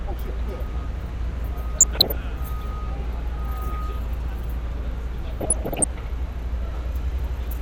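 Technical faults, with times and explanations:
1.80–2.17 s, DAB burbling: residual bit errors corrupt sub-band samples and scale factors, causing bubbling chirps. A spectrogram shows scattered, frame-length blocks flaring in isolated bands.
5.40–5.84 s, DAB burbling: a slightly heavier error burst gives denser squelching over the sound, with more brief band-limited level jumps visible as patchy spectrogram tiles.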